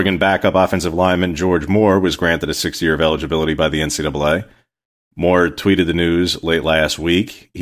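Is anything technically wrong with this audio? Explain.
No, nothing is technically wrong with this audio.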